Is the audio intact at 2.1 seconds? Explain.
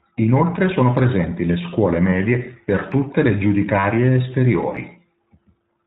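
No. Lost iLBC frames at 2.10 to 2.12 s leave a 20 ms gap, which fits a single dropped frame. The decoder covers it by repeating the last pitch cycle blended with noise, so the moment sounds like a briefly held, faintly buzzy vowel. Because each iLBC frame decodes independently, the voice recovers almost immediately afterward.

That gap sits inside audio coded throughout with the iLBC codec, which fits about 15.2 kbps with 20 ms frames. The codec discards everything above 4 kHz and rebuilds each frame's excitation on its own, giving the speech a muffled, slightly rough, synthetic edge that is plainly audible.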